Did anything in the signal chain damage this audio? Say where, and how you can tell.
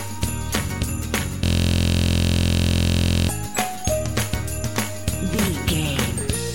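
Yes. A system hang loop at the driver or buffer stage runs from 1.45 s to 3.29 s. The same 23.2 ms slice repeats exactly, dozens of times, producing a steady 43.1 Hz buzz, which fits a 1024-sample ring buffer. On the waveform, identical short cycles tile the span. The spectrogram shows a harmonic comb at multiples of about 43 Hz. The host froze while the hardware kept replaying its last buffer.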